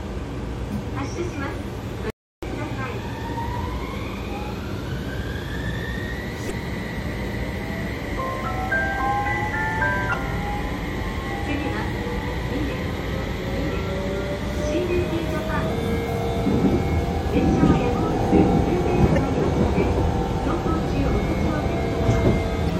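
At 2.10 s the sound stops dead and returns at 2.43 s, an audio dropout to silence lasting about 0.32 s. The input was likely lost briefly, perhaps through a link failure or stray mute, while the recorder kept writing silence. The gap has no room tone. On a waveform it is a flat line; on a spectrogram, a dark vertical band with hard edges on both sides.

Five short blips follow, each about 40 ms long and caused by damaged data in a compressed stream: 6.47–6.51 s, 10.10–10.14 s, 15.66–15.70 s, 19.14–19.18 s and 22.66–22.71 s. At each one the decoder hit corrupted frames, lost sync and skipped ahead to the next valid header. A spectrogram shows narrow vertical smears of broadband or oddly tonal energy, and the waveform shows a discontinuity where content jumps.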